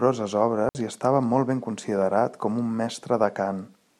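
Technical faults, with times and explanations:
0.69–0.75 s, digital wireless dropout: the radio link lost too much data, so the receiver muted for 60 ms, leaving a clean, noiseless hole just before "i estava molt ben".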